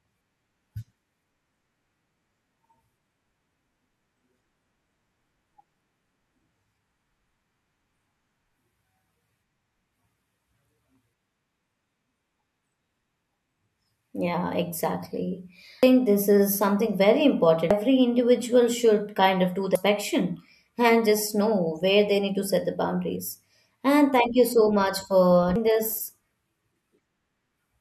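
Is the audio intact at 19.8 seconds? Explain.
No, not quite. At 19.75 s there's a brief chirp, squawk, click or short hole from damaged data in the compressed stream: a corrupted stretch of bytes throws the decoder off, so it misreads the frame, loses sync and hunts for the next valid header before the speech carries on.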